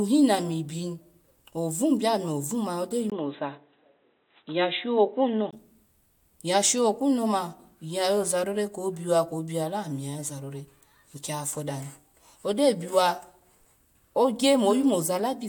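At 3.10 s a gap of about 20 ms opens, and until 5.53 s the speech loses everything above 3.9 kHz, sounding dull and boxy at unchanged level with a faint new noise floor, likely an input switched to a poorer device before returning.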